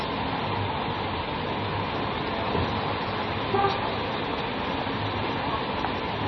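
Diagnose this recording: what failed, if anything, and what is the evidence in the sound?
The codec stage failed here, most likely a heavily starved MP3 encode, which fits a bitrate down around 24 kbps. Throughout the clip the band stops dead at 5.9 kHz, where the encoder lowered its treble cut-off to save bits. Below that, weak frequency lines drop in and out from frame to frame, giving a watery, swirling texture with metallic chirps on bright content and smeared, softened attacks, all typical of heavy MP3 compression.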